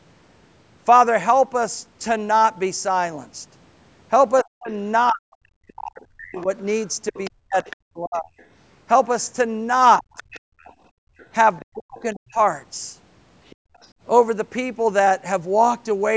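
From 4.42 to 8.31 s the talker keeps dipping out in pieces, with drops as deep as roughly 40 dB and about two seconds lost in total. That's speech suppressed in double talk: both ends were likely talking at once, and the echo canceller, unable to separate the talker from the loudspeaker echo, turned everything down. Overlapping that, from 5.95 to 8.46 s, a second voice sits underneath at roughly 20 dB below the talker. That's the other side's voice leaking through, most likely far-end audio from the loudspeaker that the canceller didn't fully remove from the mic.

The pattern repeats. There's a brief suppression from 9.99 to 10.2 s, only about 70 ms in total and around 25 dB down. Leakage returns from 10.16 to 11.65 s, at roughly 25 dB under the speech. Inside that stretch, from 10.4 to 11.18 s, the room tone itself drops by about 30 dB for around half a second. That's background gated by the echo canceller, which clamped the mic while the loudspeaker played and then let go.

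The talker is chopped again from 11.71 to 12.39 s, roughly 40 dB down for about half a second. The last bit of leakage runs from 13.47 to 13.89 s, faint at around 30 dB below the speech. Within it, the background gates out again from 13.56 to 13.8 s, by about 29 dB.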